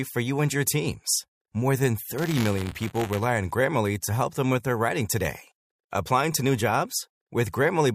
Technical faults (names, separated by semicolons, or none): buffer tearing